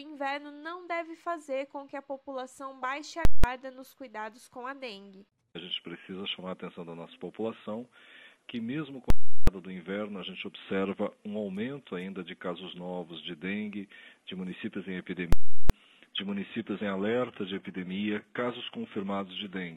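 Three bursts of invalid numbers at full scale hit the audio, from 3.25 to 3.44 s, 9.10 to 9.47 s and 15.33 to 15.70 s. Each is heard as a loud pop at both edges with silence between. On a waveform each shows as a flat slab far beyond the audio's peaks. The 186 ms and 372 ms lengths fit 8192- and 16384-sample blocks. From 16.10 s to the end, an adaptive stream at a lower bitrate takes over without a gap. Codec artefacts rise abruptly, which points to a switch from roughly 96 kbit/s AAC-LC to 16 kbit/s HE-AAC.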